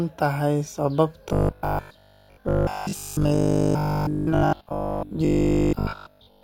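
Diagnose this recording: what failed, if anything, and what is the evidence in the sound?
From 1.29 s to 6.43 s the speech turns into a rigid, metallic buzz fixed at 50 Hz, still loosely tracking the words: robotic sound from repeated short buffers. The likely cause is a driver or buffer starving, replaying its last 20 ms slice while most of the incoming audio is skipped.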